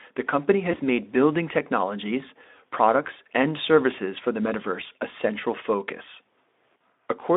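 At 0.71–0.78 s, after "the company" and before "made building technologies", and again at 3.03–3.08 s, just before "and services for the", VoIP packet loss concealed by the speech codec briefly turns the sound into a fading buzzy smear, consistent with one lost 20 ms frame. On a spectrogram, the harmonics flatten into a steady, blurred band that dims. The waveform shows a shrinking, over-regular stretch rather than a gap. The light hoarseness of the Speex narrowband line carries through both.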